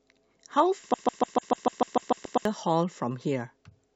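A broken-record loop runs from 0.94 to 2.45 s in this speech recording: a fragment about 148 ms long plays 11 times in a row, exactly the same each pass, so the sound stutters mechanically for about a second and a half. The likely cause is a player, encoder or stream that stalled and kept resending the last piece it held. Whatever should have been heard in that stretch is gone. Damaged data in a compressed stream shows up from 2.24 to 2.26 s, inside the looping section, as a brief glitch. At that point some of the compressed bytes were wrong, so the decoder misread or rejected those frames, lost sync, and had to search forward for the next valid frame header before decoding could continue.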